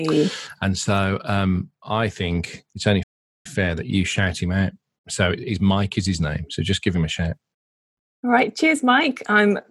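A playback stall interrupts this speech clip: the player most likely ran short of buffered data, or its playback thread was held up, so nothing reached the output until it caught up again. The result is a dead gap from 3.03 to 3.46 s, roughly 0.42 s of silence cutting into the speech mid-flow, after which the audio carries on.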